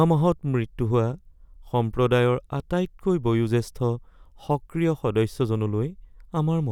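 Speech recording with no technical faults to report.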